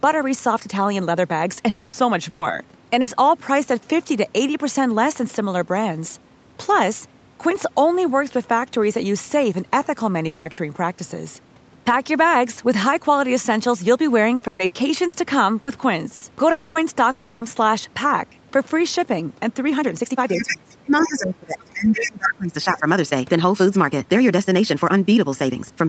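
Speech, carried over a call path that stops at 8 kHz. At 1.69–1.96, 10.27–10.48, 16.51–16.78 and 17.11–17.44 s the sound is held and fades, which is likely a long network dropout. Each one loses 0.18 to 0.3 s. At 2.29–2.44, 3.01–3.10 and 10.51–10.60 s a burst of packet loss leaves the last sound briefly held and fading, with 60 to 120 ms missing. From 14.35 to 16.24 s, repeated packet loss makes the sound choppy and robotic. Six gaps, the longest 120 ms, cover about a fifth of that span. A second voice is heard at 20.28–20.57, 20.99–21.10, 22.01–22.10 and 22.26–22.30 s. This is likely the other side's voice leaking through, mostly about 5 dB under the talker. Between 20.37 and 22.86 s the talker dips by up to about 20 dB, likely speech suppressed in double talk.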